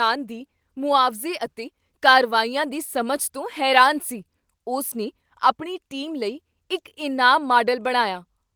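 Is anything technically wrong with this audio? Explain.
No, nothing technically wrong can be heard here.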